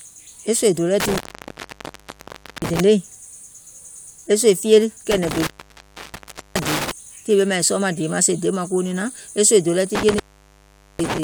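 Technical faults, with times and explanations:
1.0–2.8 s, 5.11–6.91 s and 9.95–11.24 s, intermittent contact: a loose plug or cable connection in the signal path breaks for a moment, so the speech drops out. The line stays open for about 1.44 s, then 1.09 s, then 0.8 s. Each gap is framed by crackle as the contact scrapes open and shut. While the circuit is broken, faint hiss remains. The last fault runs to the end of the clip.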